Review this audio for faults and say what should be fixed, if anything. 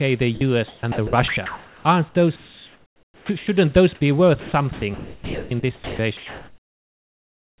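The speech drops out twice, for 60 ms each, at 0.35–0.41 s and 3.95–4.01 s. Steady noise stands in for it. This is likely sound dropped by the voice detector. The sender judged the sound as background and stopped sending. The receiver filled the gap with comfort noise.

The speech is choppy from 0.68 to 1.85 s, from 2.36 to 3.47 s, and from 4.4 s to the end. Parts of the speech give way to synthetic noise, about 0.75 s, 1 s and 2.5 s in total. This is sound chopped by the voice detector, which likely switched on and off repeatedly.

The call path carries nothing above 4 kHz, which fits G.711 mu-law at 64 kbps.

To prevent this, lower the voice detector's threshold or turn off discontinuous transmission on the sending side.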